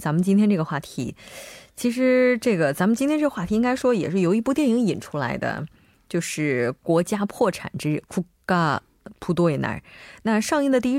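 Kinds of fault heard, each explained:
CD scratch ticks: A flaw on the disc ruins more data than error correction can restore, once per revolution. The player patches or silences the lost samples. Here five brief ticks sound between 0.32 and 1.37 s, each a few milliseconds at most.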